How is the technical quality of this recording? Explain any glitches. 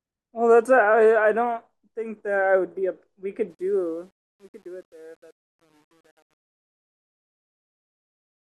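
The fade-out on this speech clip suffers from truncation distortion. From 3.5 s to the end at 8.49 s, the level stage keeps too few bits without dither, consistent with a 9-bit word length. The waveform collapses into coarse steps, and from 4.43 s onward the tail turns gritty.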